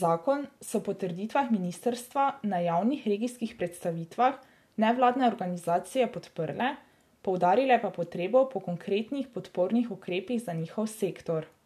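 No technical faults can be heard anywhere in this speech recording. There is no moment in it that calls for comment.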